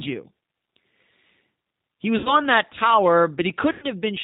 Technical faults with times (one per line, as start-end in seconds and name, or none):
0.00-4.24 G.729 codec
2.18-2.39 VoIP packet loss concealed by the speech codec
3.72-3.86 VoIP packet loss concealed by the speech codec